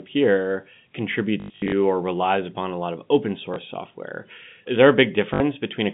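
A robotic stutter breaks up the speech from 1.4 to 1.72 s, with a buzz at about 50 Hz through a run lasting up to 100 ms. Shorter catches follow at 3.54 to 3.56 s and 5.34 to 5.4 s. This is packet loss with the last packet repeated: the receiver replayed the previous chunk, which fits 20 ms packets, and the repeats seldom line up with the pitch, all within the narrow telephone band of the G.711 line.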